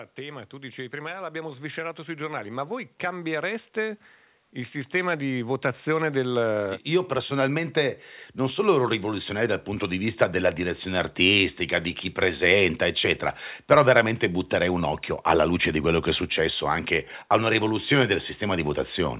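Speech, heard through a call path whose sound stops at 4 kHz, which fits a narrowband telephone codec such as G.711. The fault is automatic gain rising. From 0.19 s to 10.19 s, the level climbs steadily by about 20 dB. Voice and background swell together. The gain control judged the input too quiet and raised it gradually.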